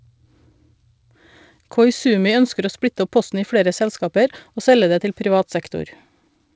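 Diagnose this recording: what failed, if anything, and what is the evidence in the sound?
Nothing failed in this recording; the speech comes through a wideband call path with nothing above 8 kHz, as that path normally gives.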